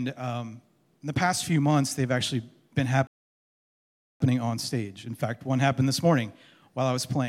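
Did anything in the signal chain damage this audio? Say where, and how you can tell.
Yes, a rebuffering stall at playback: from 3.07 to 4.21 s the flat waveform and empty spectrogram column show a starved buffer pausing, then resuming intact, adding 1.13 s.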